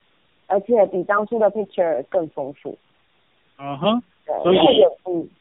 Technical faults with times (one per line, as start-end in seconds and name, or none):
0.00-5.40 tandem speech coding